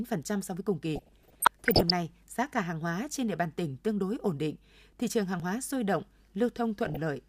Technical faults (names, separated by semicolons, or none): DAB burbling; dropped buffer (overrun)